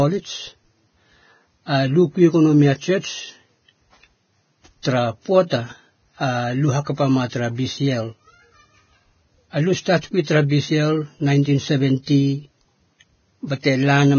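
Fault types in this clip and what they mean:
Vorbis compression: Throughout this speech, nothing sounds above about 6.6 kHz. The upper band that remains is hissy and grainy, with consonants smeared into noisy texture and a rough edge on voiced sounds. The damage is heavy and points to a very low bitrate near 17 kbps, with lossy Vorbis coding the likely cause. A plain low-pass filter would leave the band below the cut-off clean and would not add this granular hiss.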